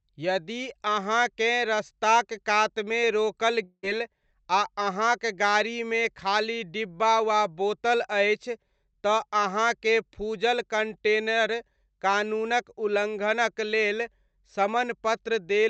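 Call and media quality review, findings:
Long network dropout, 3.63–3.85 s, right after "अहाँकेँ रस्ताक कातमे रोकल": speech stops and a fading buzz fills about 0.2 s, then roughly 50 ms of silence before audio resumes with that stretch missing. Likely jitter-buffer concealment covering lost packets. Unlike a brief packet loss, the concealment decays fully to silence, and content is skipped rather than delayed. Opus call path audible around it as band-limiting near 8 kHz.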